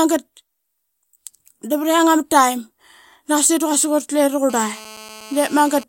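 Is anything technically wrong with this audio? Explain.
Yes. From 4.50 s to 5.84 s there is GSM phone buzz. A 2G handset close to the recording chain is in a call and transmitting in bursts about 217 times a second. The audio circuitry rectifies those radio pulses into the signal. The result is a hard, raspy buzz at 216.7 Hz, rich in harmonics. It runs steadily under the speech, about 21 dB below it. It has no relation to what is being said.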